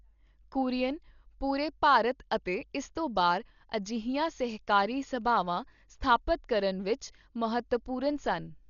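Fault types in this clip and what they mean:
Dolby Digital compression: a low-bitrate encoder, likely AC-3 style, starved many frequency lines of bits and had them filled with dither noise. The speech sounds dull, with nothing above 6.9 kHz and a rough, fluttering grit around tones, which fits a bitrate near 40 kbps.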